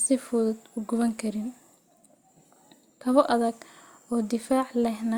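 No technical faults turn up anywhere in this speech recording. There is no event to place in time or explain.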